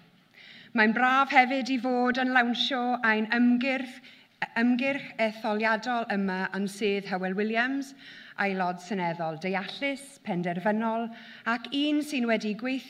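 No technical faults are audible.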